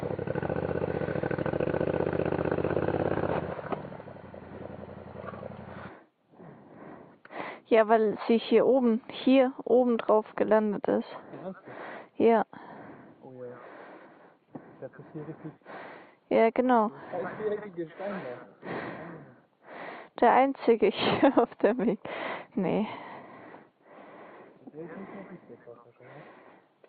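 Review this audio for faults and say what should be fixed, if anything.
Nothing here needs fixing; no faults were found.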